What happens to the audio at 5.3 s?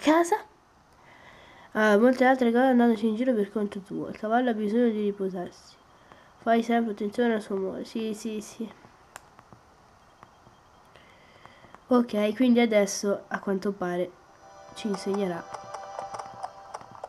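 Nothing goes wrong at 5.3 s; the audio plays through that moment intact, with no dropout, click, glitch or other fault to be heard.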